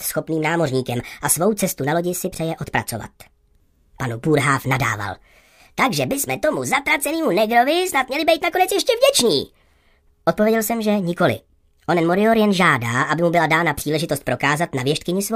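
Throughout the audio, a wrong sample rate makes everything run about 1.38 times too fast and sound roughly 5.5 semitones high, which fits 32 kHz material played at 44.1 kHz. Unlike a pitch shift or time-stretch, speed and pitch rise together by the same ratio.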